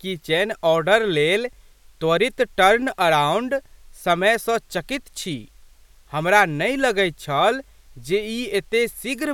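No technical faults can be heard anywhere in this speech recording.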